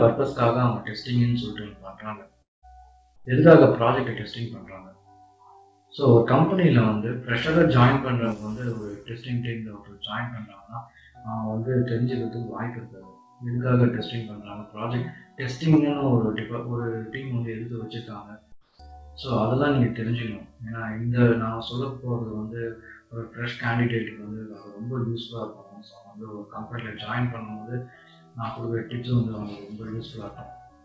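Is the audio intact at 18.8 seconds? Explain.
No. From 18.52 to 18.79 s the background turns into a steady, featureless hiss about 7 dB quieter: comfort noise in place of the background, likely from discontinuous transmission filling the 270 ms pause. At 18.77 to 18.79 s the returning sound starts abruptly without its soft beginning, an onset clipped by the voice detector, likely because 20 ms went unsent.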